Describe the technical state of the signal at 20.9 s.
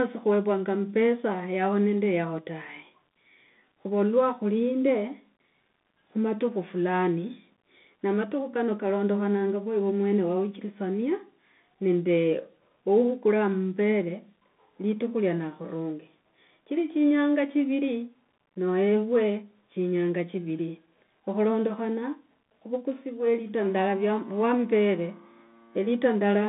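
Bluetooth CVSD headset codec at 20.9 s, as throughout the speech: each sample is a single up-or-down bit whose step size adapts, which fits a 64 kbps headset link. The line passes only about 150 Hz to 3.6 kHz, so the sound is thin, with plainly audible coding damage.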